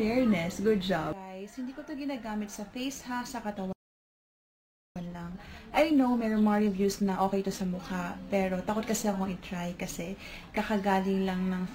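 A playback stall runs from 3.73 to 4.96 s: the sound cuts off mid-flow and the output falls silent for about 1.23 s. The likely cause is the player running dry of data or its playback thread being held up, so nothing reaches the output until it recovers.

Time-compressed catch-up follows from 4.96 to 7.96 s, as the player works off the backlog the stall left behind. Small slices are dropped and cross-faded together, so the audio runs about 1.15 times faster at unchanged pitch, sounding hurried.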